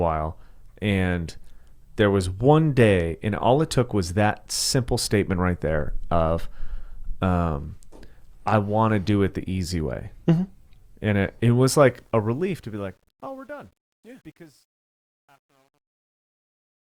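From 11.81 s, just after "it it was", the speech fade-out that runs from about 11.8 s to the end shows truncation distortion on a fade: the gain stage keeps only about 10 bits with no dither. From 13.07 s to 16.96 s the tail turns gritty. The waveform breaks into a few square steps, and the spectrogram shows broadband grit where a clean decay should be.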